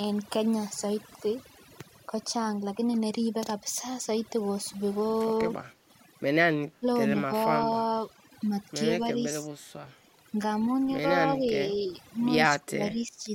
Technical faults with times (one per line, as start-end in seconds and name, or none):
0.00-13.35 overdone noise removal
5.72-5.87 background gated by the echo canceller
6.80-6.86 speech suppressed in double talk
7.28-7.76 speech suppressed in double talk
11.33-11.52 speech suppressed in double talk
12.50-13.23 speech suppressed in double talk